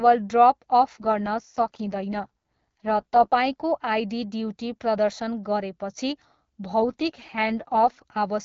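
Twice the radio link appears to weaken and the network pushes the AMR-WB coder into an AMR rate drop, from 0.93 to 3.37 s and again from 6.82 to 8.02 s. The roughness fits a fall from the 12.65 kbit/s mode to about 6.6 kbit/s, with fewer bits left for the speech itself. The audio band does not narrow and nothing drops out, but the speech turns raspy and synthetic, clearing back to the lightly coded wideband sound once the rate recovers.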